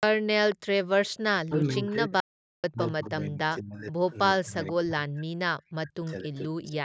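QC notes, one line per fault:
0.51–0.56, 1.86–1.91, 3.88–4.13, 4.67–4.73 and 6.06–6.41 s, echo leak: faint delayed copies of the speech creep back in, each trailing the original by about 483 ms and sitting roughly 20 to 35 dB below it. The last one is the quietest. Most are short scraps, with 3.88–4.13 and 6.06–6.41 s running a bit longer. That fixed half-second lag likely means the far end's loudspeaker was picked up by its mic and its echo canceller didn't fully subtract it.
1.3–3.99 and 4.43–6.77 s, speech suppressed in double talk: the talker keeps ducking while the other side speaks, at worst by around 40 dB. That adds up to about two seconds in the first stretch and a second and a half in the second. What you're hearing is likely the echo canceller failing to tell this voice apart from loudspeaker echo and clamping down on both.
2.20–2.64 s, audio dropout to silence: the sound cuts out cold for about 0.43 s, right inside the first suppressed stretch, then resumes mid-flow. 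The gap is dead silence with no room tone at all, which sets it apart from the ducking around it. It's likely the input dropped, from a link or device hiccup or a brief mute, while the recorder kept writing silence. Whatever was said in that window is gone.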